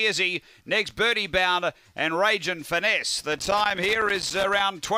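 Loose connector crackle runs from 3.32 s to 4.60 s, an irregular burst of scratching and crackle lasting about 1.3 s near the end of the audio. A worn or dirty contact in the signal path is shifting, so the connection keeps closing and opening. Each break chops the sound for an instant. Any DC present on the line turns those rapid make-and-break moments into pops, giving the ragged, uneven texture heard here.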